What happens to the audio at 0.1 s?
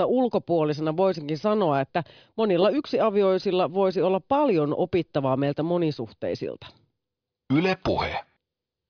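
Nothing goes wrong at 0.1 s; the speech is intact at that moment, with no dropout, click, distortion or other fault.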